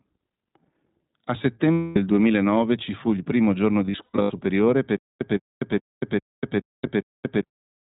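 A short speech recording, run through the iLBC codec the whole way. Everything above 4 kHz is gone, and the voice has that slightly rough, synthetic edge iLBC gives, plainly audible here. The character suggests its 20 ms frame mode, which fits a rate around 15.2 kbps. There are two patches of lost iLBC frames. From 1.74 to 1.98 s, about 240 ms of audio goes missing, roughly a dozen frames' worth. The decoder papers over it by repeating the last pitch cycle with some noise mixed in, so you hear a held, faintly buzzy vowel that fades rather than the real sound. The second patch comes right after "fu il primo giorno", from 3.86 to 4.32 s. There, about 280 ms of losses are scattered across 440 ms, with the longest unbroken gap somewhere around 100 ms, so the concealment flickers in and out instead of one long drone. Because each iLBC frame is decoded on its own, the voice snaps back almost immediately after each gap. 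Then from 4.97 to 7.41 s there's a stutter with silent gaps. A 165 ms burst plays, followed by 243 ms of dead digital silence, repeating every 408 ms, six times over. That's most likely the player or stream stalling and replaying its last fragment on each retry before running dry, and whatever should have played in that stretch is simply lost.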